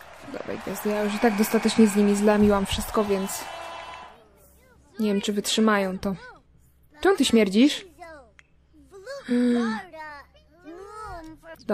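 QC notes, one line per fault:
Nothing stood out on listening.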